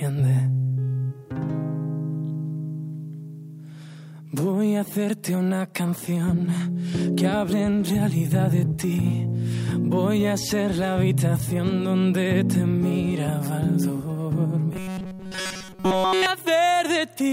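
The audio turns into a robotic sound from repeated short buffers between 14.73 and 16.26 s. Across that stretch it becomes a rigid, metallic buzz locked at 188 Hz. The repetition looks total, with essentially nothing fresh getting through. The likely cause is audio arriving too late, so the playback side keeps looping the last fragment it holds. A 188 Hz buzz means each repeat lasts about 5.3 ms. That fixed loop length sets the pitch.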